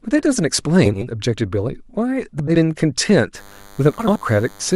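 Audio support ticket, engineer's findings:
Frames out of order at 0.85–1.05 s, 2.39–2.56 s and 3.99–4.18 s: garbled flutter, halves of each stretch swapped, no time lost. Probable cause is packet reordering upstream of the decoder, with two adjacent runs decoded in the wrong order. The 80 ms swapped halves point to four-frame runs. On the waveform, envelope discontinuities at each join. On the spectrogram, harmonic tracks that break and restart mid-contour.

DECT cordless phone buzz from 3.35 s to the end: a steady, thin buzz roughly 30 dB below the signal, overlapping the third reorder. Probable source is a nearby DECT handset or base whose 10 ms radio bursts are rectified in the analogue audio path, giving a 100 Hz fundamental. On the spectrogram, a comb of horizontal lines at 100 Hz spacing reaching well up the band. On the waveform, a regular pulse train repeating every 10 ms, visible in pauses.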